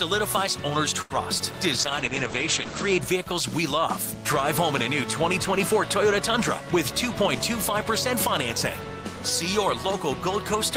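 At 1.01 s there's a short stall from a late packet. A packet wasn't there in time, the jitter buffer ran dry, and the receiver held the last bit of sound for about 87 ms until the packet turned up. Nothing's actually lost, since playback picks up right where it left off, but you hear that moment drawn out a little too long, with a faint buzz or dip, and everything after lands about 87 ms later.

Then from 1.72 s to 3.07 s there's a call bitrate drop. The bandwidth estimate sank, so the encoder had to work with far fewer bits. The coarseness points to a fall from roughly 32 kbps to about 11 kbps, and at that rate the top end gets cut off at 8 kHz instead of reaching 20 kHz. The sound goes dull and a bit watery, worst for about a second, before it clears up again.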